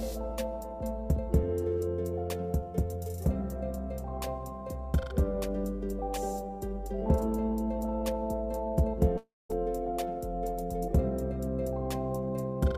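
At 9.17 s the audio gives way to a short buzzy continuation of the preceding sound that fades out, leaving about 0.2 s of silence before the signal returns at 9.51 s. Roughly a third of a second of material is simply gone, and the audio resumes further along. This is most likely a long network dropout: packets stopped arriving, the receiver extended the last sound until that concealment ran out, and the lost section was never recovered.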